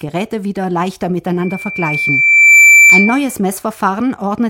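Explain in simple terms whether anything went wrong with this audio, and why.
Something did go wrong: a loudspeaker feedback squeal. Right after "wieder leichter", at about 1.42 seconds, a single high whistle near 2.3 kHz appears. Over roughly a second it swells until it is clearly louder than the speech, and it lasts until about 3.35 seconds. A microphone was picking up the speaker it was feeding, so that one pitch kept looping and growing. A steady electrical whine would stay at the same loudness from the start instead of building up like this.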